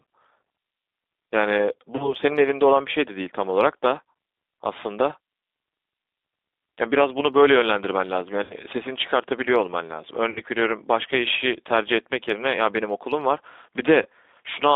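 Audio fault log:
Throughout: G.729 codec. The band is confined to roughly 250 Hz to 3.7 kHz, and a spectrogram shows a hard ceiling with nothing above it. Inside that band, the speech is rebuilt from a vocal tract filter, a pitch predictor and a few pulses per frame, so it sounds rough and synthetic, which fits G.729A at 8 kbit/s. The damage is plainly audible. On the spectrogram, harmonics look smeared and blocky from frame to frame.
1.96–2.14 s, 8.44–8.54 s, 10.30–10.41 s, 14.02–14.06 s: VoIP packet loss concealed by the speech codec. At 1.96 s and 14.02 s, about 30 ms of signal went missing, which fits one lost packet. At 8.44 s and 10.30 s, about 60 ms went missing, which fits two. The decoder filled each gap by extending its last pitch and filter at falling gain, so the sound is stretched into a buzzy tone or coloured noise and then fades. Because each frame builds on the previous one, the sound stays weak until the end of each range. 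On the spectrogram, frozen harmonics run on and dim. On the waveform, the envelope sags.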